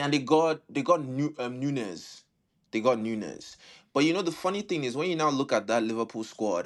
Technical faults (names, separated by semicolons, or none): none